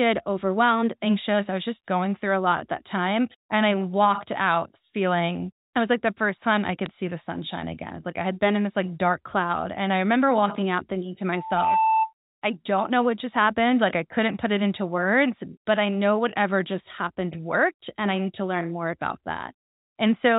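At 6.86 s there are bit errors on the digital phone line. Some bits in the mu-law stream were flipped, and each flip changes a single sample. A hit on a high-order or sign bit moves that sample far from its true value, so the sound is a short tick over the speech. The damage spans only a few samples, which fits an error rate of roughly a tenth of a percent.

From 11.32 s to 12.13 s there is a loudspeaker feedback squeal. The microphone is picking up the loudspeaker it feeds. At 884 Hz the loop gain goes above one, so that tone grows on its own. It swells over roughly 0.4 s and ends up about 5 dB above the speech. It is heard as one steady tone rising into a squeal.

At 13.93 s the bit errors return. The error rate is again low, around a tenth of a percent or a little more. They produce another brief tick. The telephone band of the G.711 coding, with nothing above 4 kHz, stays audible throughout.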